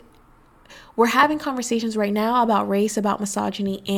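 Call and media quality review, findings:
Overlap between stream segments. Short skip at 1.23–1.26 s, just before "conversations right now about"; waveform jumps, about 26 ms missing. Second skip at 3.24 s, just after "right now about race", about 17 ms lost. Probable component: segment stitching in player. Mechanism: adjacent segment timestamps overlap, player trims the overlap from audio that was not duplicated. Skips about 2 s apart, which fits 2-second segments.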